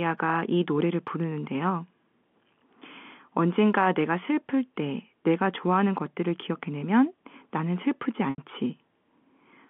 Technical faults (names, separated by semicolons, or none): packet loss with pitch repetition